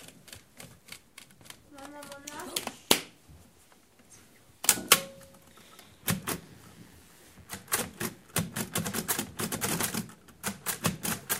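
From 6.25 to 8.48 s, 60 Hz mains switching spikes leak into the signal as mains buzz, a steady raspy drone roughly 30 dB below the sound.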